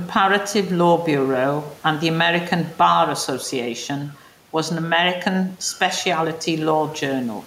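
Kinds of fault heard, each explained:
Gain pumping: The input gain is likely set far too high for the microphone, so a fast limiter or compressor clamps down whenever the speech gets loud and releases in the pauses. Throughout this clip the room noise sits about 34 dB below the speech, and the gain swings by around 5 dB. Loud and quiet passages end up closer in level, and the speech sounds squashed.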